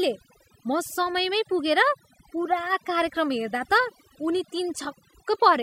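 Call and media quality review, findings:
Overdone noise removal throughout the speech clip. Background drops and breaks up into twinkling specks. Denoiser set too aggressive, clamping bands near its noise estimate and taking quiet voice detail out along with them.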